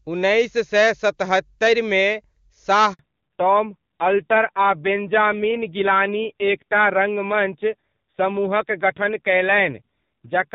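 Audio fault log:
2.93 to 2.99 s, handover gap: the sound falls away within a few tens of milliseconds and stays silent for 60 ms, as the call is passed from one network to another and no frames arrive while the new link comes up. Unlike a single lost packet, there is no concealment smear or repeated fragment. It is a clean hole at a boundary, and what follows sounds different from what came before, which marks it as a network switch rather than a random loss.
2.99 s to the end, fallback to narrowband: straight after the gap, everything above 4 kHz is gone and the sound turns dull and rough, because the call has dropped from HD Voice to the older narrowband codec. Before the switch the wideband coding is clear, with little or no audible codec damage, which fits a high rate of about 23.85 kbit/s. After it, the raspiness points to a low narrowband rate near 5.9 kbit/s. A plain low-pass filter would cut the top without adding roughness, and it would not start at a dropout.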